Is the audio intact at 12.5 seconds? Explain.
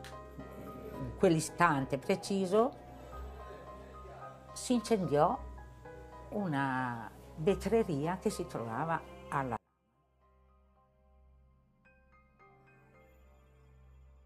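No. At 12.5 seconds the sound has nearly collapsed, dropping by about 33 dB from 9.57 s through to the end of the clip and leaving only a faint residue of what was there before. The likely cause is one channel inverted. One stereo channel carries reversed polarity, so when the two are summed to mono, everything they share cancels, and only the small difference between them survives.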